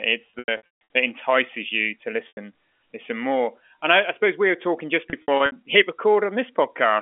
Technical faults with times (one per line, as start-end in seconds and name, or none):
0.30-0.81 packet loss with pitch repetition
2.28-2.37 packet loss with pitch repetition
5.10-5.52 packet loss with pitch repetition